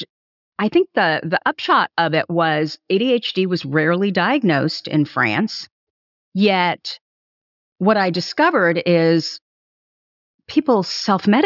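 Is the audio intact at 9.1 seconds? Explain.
Yes, at 9.1 seconds the speech runs on without any audible dropout, click, distortion or other technical fault.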